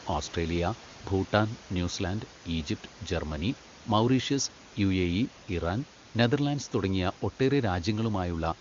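Nothing stood out on listening to this speech recording.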